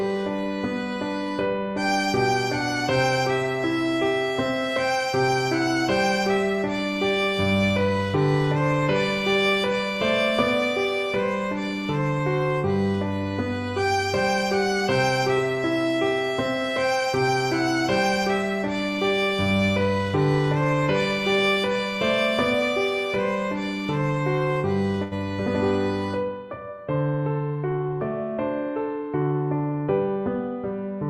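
At 25.03 s to 25.14 s a burst of packet loss occurs: 80 ms of audio never arrived in time, so the receiver stretched the last sound for 79 ms, fading it, then resumed further on. Unlike a plain dropout, the gap sounds filled rather than silent.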